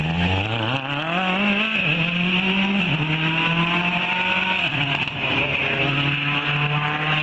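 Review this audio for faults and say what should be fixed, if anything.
Nothing needs fixing: the signal shows only the expected effects of call microphone processing, with the lowest bass trimmed by its high-pass filter and no content above 8 kHz.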